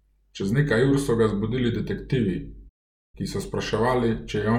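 A playback stall, likely the player starving for data, cuts the speech to silence from 2.68 to 3.15 s, between "so ga zbudili detektivi" and "ki so".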